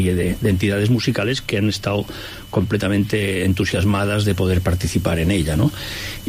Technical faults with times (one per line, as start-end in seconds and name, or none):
none